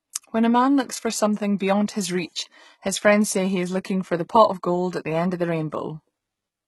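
Throughout, the s sounds turn gritty and metallic, with nothing above 11.8 kHz, likely from heavy HE-AAC compression at roughly a 16 kbps bitrate.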